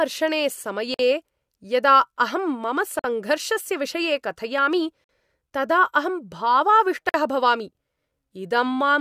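At 0.94, 2.99 (right after "यदा अहं मम"), 5.04 and 7.09 s, a 50 ms gap between chunks interrupts the speech every 2 s; unlike a dropout, nothing is lost, and the speech resumes exactly where it stopped.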